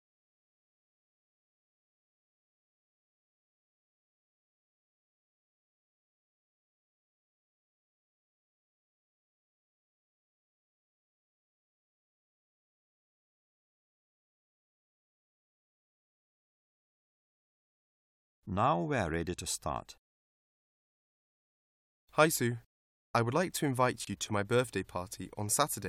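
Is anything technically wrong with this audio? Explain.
Yes, there's one glitch near the end. From 24.05 to 24.07 s there's a gap between chunks: a hard-edged hole of about 25 ms where the audio was joined from separately delivered pieces, consistent with 4 s chunks, and silence got inserted at the seam.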